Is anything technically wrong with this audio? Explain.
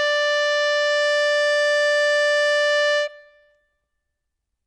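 Yes. Throughout the music, nothing sounds above about 10.1 kHz, and the top end has a smeared, swirly low-bitrate MP3 character. This is likely low-bitrate audio saved at a high bitrate: unlike a simple filter, the coding artefacts remain, suggesting roughly 40 kbit/s re-encoded at high rate.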